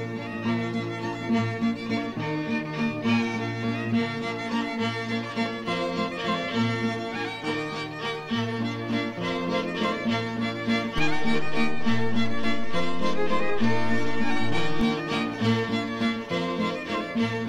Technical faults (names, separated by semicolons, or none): DC step